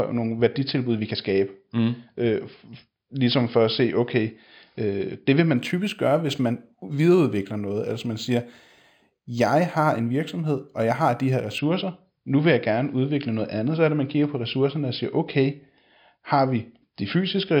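From 5.57 s to 11.59 s, after "det vil man", imaging from linear upsampling appears: straight-line interpolation from 11 kHz to 44.1 kHz dulls the top and leaves a mirrored image at 5.5 to 11 kHz, roughly 30 dB down, a metallic shimmer on sibilants.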